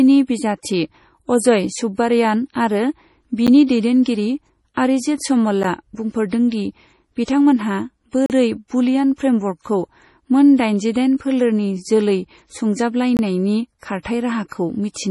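From the start, the speech has a watery, swirling quality with smeared consonant attacks and no content above 11.5 kHz, most likely MP3 compression at a low bitrate, around 32 kbps. The encoder ran short of bits, so it cut the treble and let weak frequency lines flicker on and off between frames. On a spectrogram this shows as a hard ceiling at 11.5 kHz and patchy, blotchy energy below it.

At 3.47 s and again at 5.63 s the sound drops out for about 11 ms, each a block of digital silence where zeros replaced the samples, which fits a 512-sample buffer that wasn't filled in time. A longer hole of about 38 ms follows from 8.26 to 8.30 s, and one of about 21 ms from 13.17 to 13.19 s, which fits a 1024-sample buffer. Each cut is abrupt, and the shorter ones sound like ticks. On the waveform they appear as near-flat stretches, and on a spectrogram as thin vertical blank stripes.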